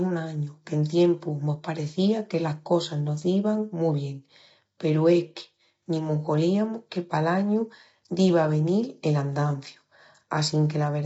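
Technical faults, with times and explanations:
Throughout, low-delay AAC compression: the speech sounds rough and grainy, with noise filling the gaps between pitch harmonics and nothing above 7.8 kHz. The likely cause is AAC-ELD, the low-delay codec of video calls, at a rate that fits about 24 kbps. At a rate this low, its coarse coding of the spectrum leaves the damage plainly audible. This sets it apart from ordinary AAC or plain band-limiting.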